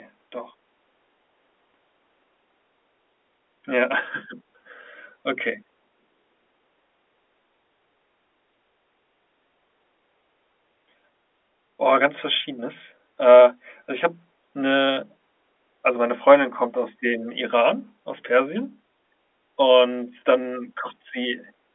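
Nothing in this recording stood out on listening.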